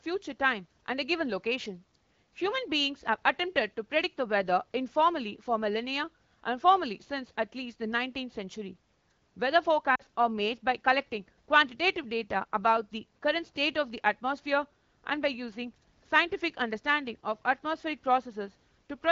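At 9.95 to 10.02 s the speech briefly dips toward near silence. These are lost AMR speech frames. About 40 ms is missing, which fits two dropped frames. The wideband decoder repeats the last pitch and vocal tract settings with falling gain, then resumes.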